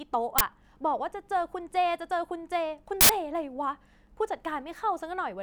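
At 0.38 to 0.41 s a loud crack, and again at 3.01 to 3.09 s a harsh, loud burst of digital noise, cuts through the speech: an uninitialised buffer, where leftover memory was played as samples. The lengths fit blocks of 1024 and 4096 samples. A loud crack or burst of noise, not a silent gap, sets it apart from a dropout.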